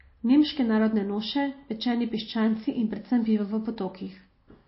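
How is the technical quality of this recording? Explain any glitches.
Quality is poor, with plainly audible codec damage across the whole speech clip, pointing to a very low bitrate around 24 kbps. Throughout, the likely cause is MP3 compression. Short of bits, the encoder cuts everything above 5.6 kHz and drops weak frequency lines that flicker between frames, which sounds watery. A spectrogram shows a flat ceiling and speckled holes.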